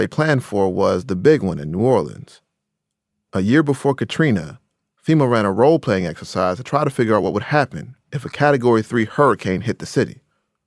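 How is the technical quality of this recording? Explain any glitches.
No technical glitches can be heard in the recording; the signal stays continuous and stable throughout.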